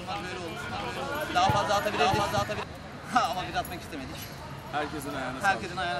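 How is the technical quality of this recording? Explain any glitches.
The recording has one clear glitch, a doubled audio track between 0.69 and 2.63 s. In that stretch a second copy of the same sound plays roughly 0.7 s behind the first, at about the same loudness, so everything is heard twice in an out-of-step echo. The copy carries no decay or room colour and starts and stops abruptly. The likely cause is the signal being captured a second time through a slower path, or an edit that left two misaligned copies mixed together.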